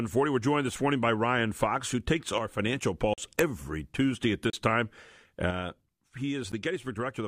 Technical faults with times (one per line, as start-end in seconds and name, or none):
2.38-2.60 one channel drops out
3.14-3.18 block of digital silence
4.50-4.53 block of digital silence
5.51-7.27 one channel drops out
6.52 block of digital silence